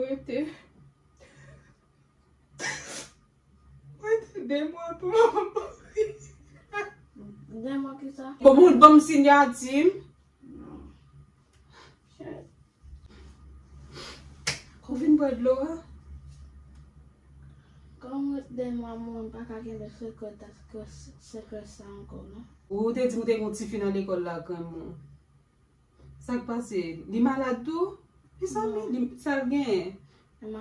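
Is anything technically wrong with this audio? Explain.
No, nothing technically wrong stands out here; it all sounds just as it should.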